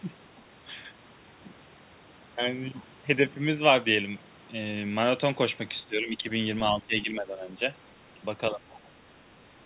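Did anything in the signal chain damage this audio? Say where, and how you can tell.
Yes. From 5.86 to 6.26 s, 6.72 to 7.6 s and 8.51 to 8.63 s the speech sinks by about 10 dB. This is speech suppressed in double talk at the call-processing stage: the echo canceller likely turned the near talker down along with the echo while both sides spoke. The waveform envelope drops, and the spectrogram dims across the band.

From 8.71 to 8.89 s a faint second voice, about 25 dB below the main speech, enters the signal. This is the other side's voice leaking through, with residual loudspeaker echo likely left in the microphone by the echo canceller. A spectrogram shows weak, separate harmonic traces under the main talker, and the waveform barely changes.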